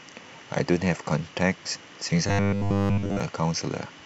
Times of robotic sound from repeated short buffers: 2.27-3.20

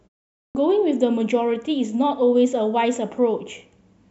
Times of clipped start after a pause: 0.50-0.55

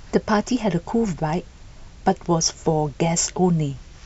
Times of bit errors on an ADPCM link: none

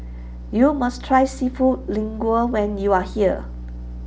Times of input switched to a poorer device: none

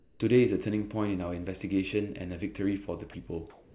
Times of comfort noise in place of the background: 0.00-0.20, 3.50-3.74

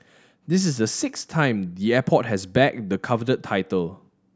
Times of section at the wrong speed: none

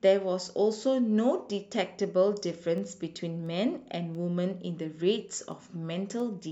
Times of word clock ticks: 0.73-6.20

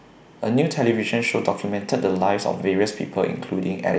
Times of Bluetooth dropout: none

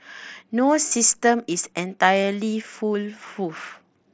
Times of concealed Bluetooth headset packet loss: 0.88-0.91, 2.23

